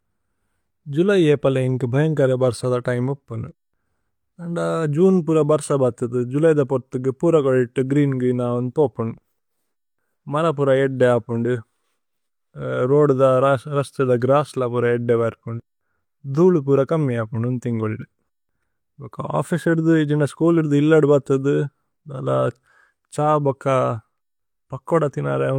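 No technical faults are audible.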